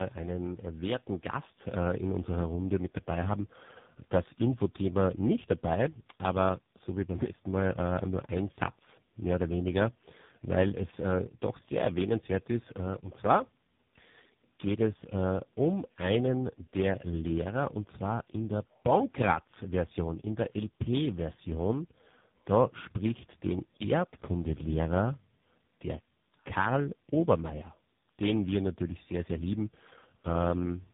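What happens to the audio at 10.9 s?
At 10.9 s, as throughout, the speech suffers tandem speech coding: three speech codecs in a row, ending in AMR-NB, each re-coding the last one's output. It sounds rough, muffled and warbly, and a spectrogram shows nothing above 3.8 kHz.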